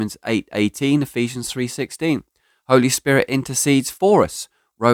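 Speech, with no technical faults.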